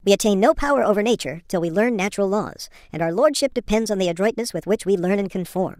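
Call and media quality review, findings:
Wrong sample rate, entire clip: speech high-pitched and hurried, about 1.38x speed, pitch up 5.55 semitones. Playback clock mismatch with no resampling; ratio fits 32 kHz audio played at 44.1 kHz. Unlike pitch shifting or time-stretching, tempo and pitch rise together.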